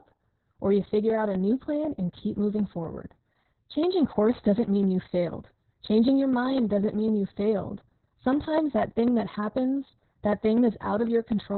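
Channel delay (comb filtering) runs through the whole speech clip. One channel arrives a fraction of a millisecond after the other, and when the two are summed to mono the shared signal cancels at evenly spaced frequencies. With a lag that short, the first notch falls somewhere around 3 kHz, and further ones sit higher up. The result is a fixed hollow, slightly phasey colouring that stays the same throughout.

Opus voice compression is also present from start to finish, with heavy damage. The sound points to the SILK speech coder in narrowband mode at a very low bitrate, around 6 kbps. Nothing is left above about 4.3 kHz, so the voice is muffled and boxy. The excitation is coded coarsely, which adds a hoarse, buzzy, slightly robotic quality, and the 3 kHz notch falls inside this narrow remaining band.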